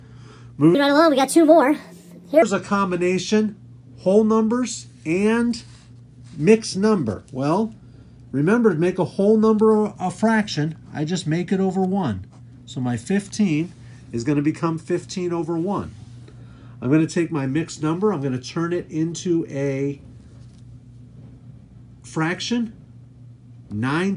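From 0.75 to 2.42 s the audio jumps about 1.45 times faster and roughly 6.5 semitones higher, a wrong sample rate consistent with 22 kHz material played at 32 kHz. Unlike a pitch shift or time-stretch, speed and pitch rise together by one ratio.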